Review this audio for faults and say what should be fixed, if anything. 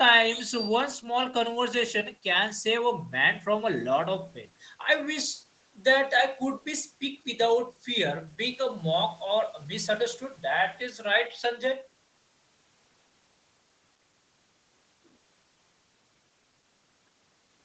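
No faults turn up in this audio, so nothing needs to be fixed.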